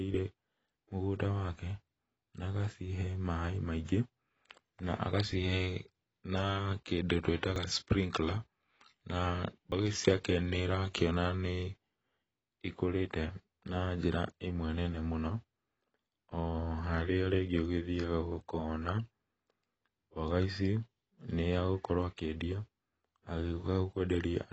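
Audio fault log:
throughout: AAC compression, likely AAC-LC at a low rate, which fits about 24 kbps. The speech is plainly damaged by the codec, so it sounds dull and muffled. The encoder quantises each block of frequency lines against a hearing model and, short of bits, drops the top band and thins detail elsewhere, which smears sibilants and leaves a warbling, fizzy texture on sustained sounds.
7.56 s and 9.72 s: dropped buffer (overrun), heard as an abrupt jump in the speech, the first just after "na kĩndũ". Around 40 ms of audio is missing each time, with no gap of silence. The program likely fell behind reading its input and the hardware overwrote unread samples, so the sound on either side of the lost piece is spliced straight together.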